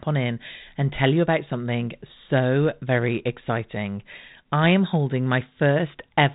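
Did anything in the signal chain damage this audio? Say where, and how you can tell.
No, nothing in the signal chain has damaged this speech. It has passed through G.726 ADPCM at 32 kbit/s, the rate DECT cordless phones use, so nothing above 4 kHz comes through and the coding adds only light noise that follows the level of the speech.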